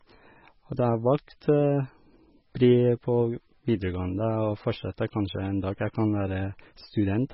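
Throughout the speech, heavy MP3 compression is likely: nothing survives above about 5.6 kHz, and starved bit allocation leaves a watery, swirling texture, which fits a 16 kbps encode.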